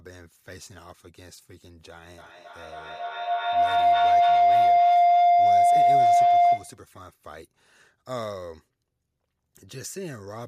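From 2.18 s to 6.86 s a tone rises out of the speech, swelling into a piercing howl near 700 Hz that peaks at about 19 dB above the talker, with a loop delay of roughly 300 ms. This is feedback howl: two devices in the same room share the call, so sound travels from microphone to loudspeaker and back with more gain on each trip. Each return narrows towards the loop's favoured pitch until the loop is broken.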